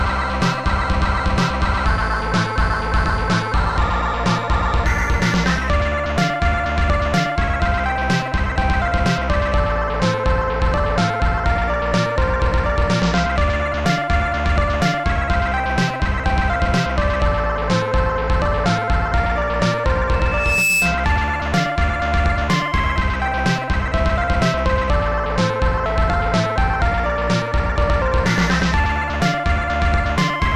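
At 20.12 s a loudspeaker feedback squeal begins. A single tone near 2.6 kHz swells over about half a second until it matches the level of the sound. The microphone is hearing its own loudspeaker, and the loop runs away. It stops at 21.13 s.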